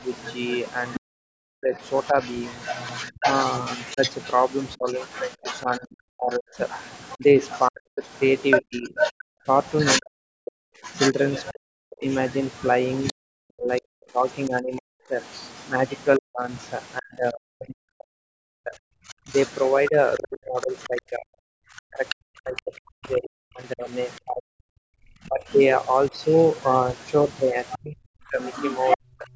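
From 0.0 to 26.1 s, speech suppressed in double talk dips repeatedly, around 40 dB at worst and about ten seconds in total. It is likely an echo canceller muting the talker during overlap, so the gaps follow the other voice rather than pauses.

From 0.11 to 16.62 s, the other side's voice leaks through about 10 dB below the talker. This is likely residual loudspeaker echo, heard as a second voice rather than as a dip.

Between 9.25 and 9.46 s, the background is gated by the echo canceller. The room sound drops about 40 dB for a fifth of a second, then returns. Unlike the double-talk dips, this affects the ambience, not the talker.

From 19.09 s to the end, the same leakage returns at about 10 dB below the speech.

From 27.77 to 29.29 s, double-talk suppression again cuts the speech by around 40 dB for roughly a second.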